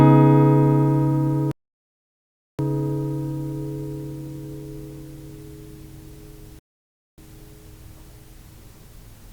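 Around 1.51 s the audio drops into silence and stays there until about 2.59 s. That's a rebuffering stall: the player ran dry of downloaded data and just waited for more. When it comes back it picks up exactly where it left off, so nothing's missing, you've only gained about 1.08 s of dead air. The same thing happens again from about 6.59 s to 7.18 s, a shorter gap adding roughly 0.59 s.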